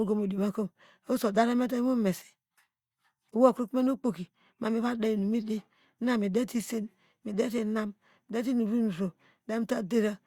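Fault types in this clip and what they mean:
No technical faults can be heard in this recording. The speech continues without any interruption or disturbance from the audio chain.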